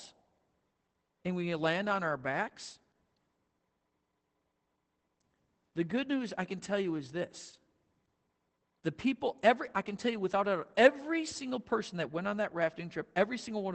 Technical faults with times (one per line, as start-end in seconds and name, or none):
0.00-13.74 Opus voice compression